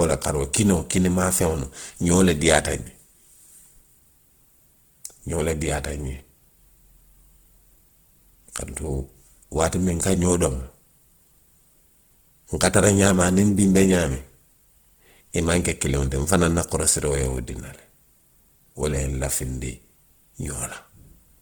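A speech clip with plainly audible Opus compression from start to finish. The damage sounds rough and grainy rather than swirly. Bands starved of bits are filled with folded copies of lower bands or with noise, so tonal parts of the sound turn noisy. The likely cause is Opus in its music (CELT) mode at a very low rate, which fits about 16 kbps. The bandwidth stays full, reaching about 20.1 kHz.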